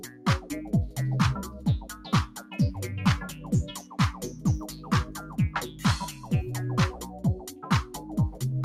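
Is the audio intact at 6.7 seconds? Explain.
No. At 6.7 seconds you're hearing the same problem that runs through the whole clip: a noise suppressor built for speech has been applied to sound it wasn't meant for. It mistakes sustained tones, ambience and reverb for noise and pulls them down, by about 10 dB at its deepest. Onsets mostly get through, but anything held sinks right after, so the audio pumps and thins out there rather than sustaining naturally.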